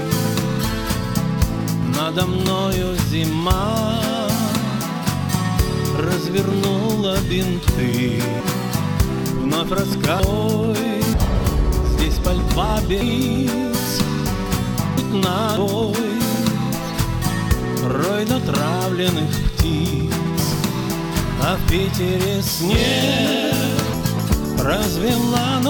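Load swings in the computer's processor, graphics card or mouse are disturbing the ground shared with the audio circuit, so computer activity noise runs under the whole clip as a buzzing, chirping rasp pulsing at roughly 200 per second. It sits roughly 30 dB below the sound and rises and falls with the machine's activity, not the audio. Separately, whole blocks of compressed data were not played, and these compressed frames skipped make the sound jump ahead by around half a second to a second at 8.40, 10.20, 11.14, 13.01, 14.98, 15.57 and 23.94 s. The frames are about 85 ms long.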